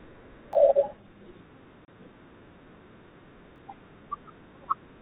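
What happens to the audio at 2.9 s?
At 2.9 s the speech carries on intact, with nothing breaking into it beyond the narrow telephone band of its G.711 coding.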